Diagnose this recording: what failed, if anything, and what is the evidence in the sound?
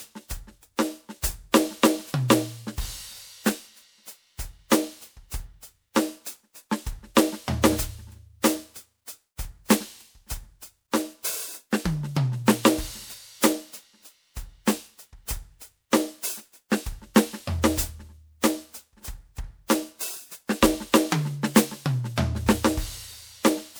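The codec stage is the likely failure: this music appears to have gone through repeated MP3 encode-decode passes, around seven, at a bitrate that sounds like roughly 128 kbit/s. This is generation loss. Throughout, the sound is swirly and hollow, with smeared attacks, because each pass requantises on a shifted frame grid and the noise and spectral holes accumulate.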